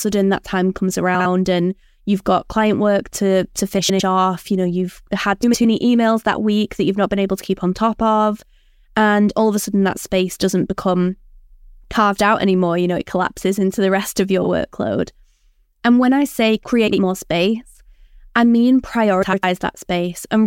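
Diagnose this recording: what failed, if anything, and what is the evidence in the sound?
Frames out of order, from the network or storage stage. Garbled flutters occur at 1.15 s after "that time comes", 3.78, 5.43, 14.42, 16.87 s after "when I say", and 19.22 s. Adjacent runs of 26, 52 or 105 ms swap places. No time is lost.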